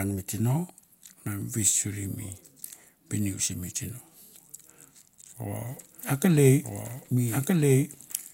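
From 5.75 s to the end, a doubled audio track appears: an equal-level copy trails about 1.5 s behind, likely from a second capture path, visible as duplicated waveform patterns.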